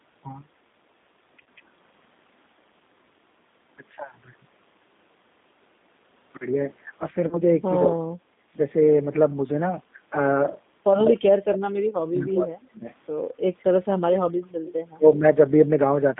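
Throughout, the G.729 codec at 8 kbit/s narrows the speech to a 200 Hz to 3.7 kHz band and rebuilds it from a filter and sparse pulses, giving a plainly rough, synthetic texture. On a spectrogram, nothing sits above 3.7 kHz and the harmonics look smeared.

At 1.43 to 1.46 s and again at 7.28 to 7.37 s, VoIP packet loss concealed by the speech codec fills a 30 ms gap each time, which fits one lost packet. The decoder repeats its last pitch and filter at falling gain, so the sound is briefly stretched and fades. On the spectrogram this shows as flat, repeated harmonic stripes. The second event spans about 94 ms in all before the speech recovers.

From 11.07 to 12.86 s, the speech dips and breaks up for around one and a half seconds in total, dropping by as much as about 40 dB. The likely cause is speech suppressed in double talk, where an echo canceller turned the talker down while both sides spoke. 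The waveform shows ragged, sudden troughs in the envelope.

At 13.59 to 13.64 s and 14.66 to 14.73 s, faint delayed copies of the speech appear about 209 and 211 ms after the original. The first is about 35 dB down and the second about 20 dB down. This is likely echo leak from a loudspeaker end whose canceller let some pickup through. Each copy shows as a weak, time-shifted repeat of the preceding spectral pattern.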